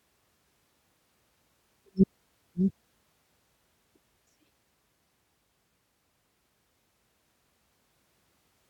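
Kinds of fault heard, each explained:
Compressed frames skipped: Whole blocks of coded audio are never played, so the speech jumps forward. About one frame vanishes at 4.16 s and about two at 7.97 s, losing roughly 100 and 200 ms.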